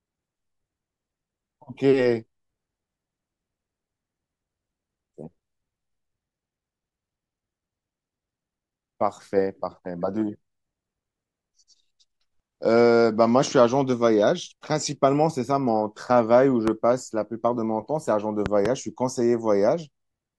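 At 16.68 to 16.70 s a single loud pop cuts through the speech, and at 18.46 to 18.68 s two more follow in quick succession, each peaking around 15 dB above the speech. A voltage spike, likely from a plug, switch or static discharge, produced these sharp transients while the speech continued underneath.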